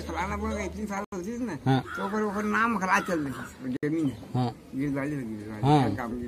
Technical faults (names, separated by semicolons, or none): Bluetooth stall